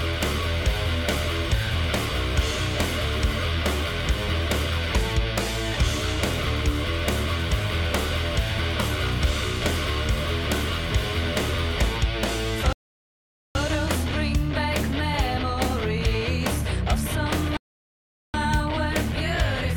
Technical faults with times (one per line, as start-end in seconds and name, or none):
12.73-13.55 rebuffering stall
17.57-18.34 rebuffering stall